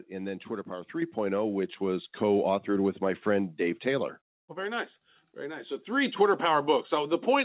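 At 1.02 s, 2.04 s and 4.08 s the call software judged the microphone too quiet and raised its input volume in a single step each time, a microphone volume stepped up fault. Voice and room noise jump together, by about 6 dB just before "which was", about 3 dB just after "which was", then about 2 dB, so the level climbs in abrupt stairs. The sound is band-limited to below 4 kHz by the G.711 call path.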